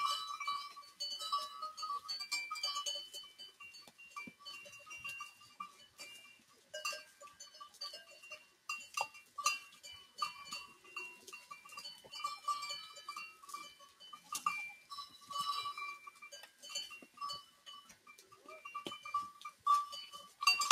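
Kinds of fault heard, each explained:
noise suppressor applied to music or sounds: A suppressor designed for speech stays active across the whole clip of sounds, treating anything steady, ambient or reverberant as noise to remove. The level swings by around 15 dB as it clamps and releases, so the sound pumps and thins. Unlike compressor pumping, which follows loudness, this follows steadiness: sharp onsets pass while sustained parts and decays are pulled down.
sound cut by the noise suppressor: Specific passages are pushed well below the surrounding level, at 0.77 to 1.0 s, 3.27 to 4.43 s, 5.31 to 8.68 s, 9.22 to 12.1 s, 13.33 to 15.29 s, 16.11 to 18.48 s and 19.51 to 19.66 s, with drops of about 10 to 13 dB. The sound sinks rather than vanishing, and its attacks survive while the held portions and tails fade early, which sets it apart from a dropout.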